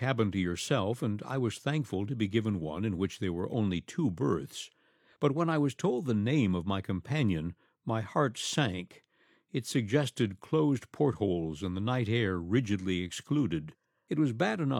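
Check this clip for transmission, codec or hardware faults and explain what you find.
Checking this clip turned up no faults to report.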